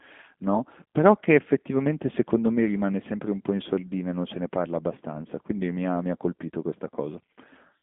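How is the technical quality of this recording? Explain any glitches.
The speech is plainly coloured by low-rate VoIP coding for the whole clip. G.729 codec damage runs throughout. The audio lives inside a telephone band of roughly 200 Hz to 3.5 kHz, with nothing above 3.6 kHz, and the texture fits an 8 kbit/s G.729A coder. The codec rebuilds speech from a vocal-tract filter, a pitch predictor and a few pulses per frame, so it sounds plainly rough and slightly synthetic. That buzzy, rebuilt quality is what separates it from simple band-limiting, which would only sound muffled.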